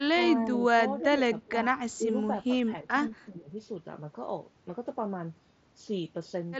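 Speech, with six brief dips at 0.30–0.62, 1.01–1.22, 1.46–1.65, 1.98–2.16, 2.49–3.01 and 3.26–3.53 s, showing as notches in the waveform envelope of about 5 to 15 dB, likely speech suppressed in double talk. At 1.91–1.96 s a faint copy delayed by 341 ms, about 40 dB down, appears as a weak repeated spectrogram trace, likely echo leak. The spectrogram also shows nothing above 7.7 kHz, consistent with the Bluetooth mSBC headset codec.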